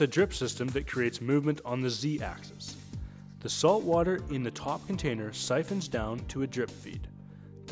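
Nothing goes wrong anywhere in this audio; there's simply no technical fault to point to at any moment.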